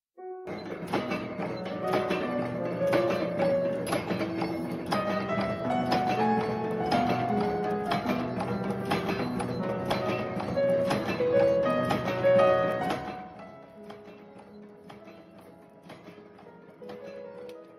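Nothing stood out as a technical problem on listening to this audio.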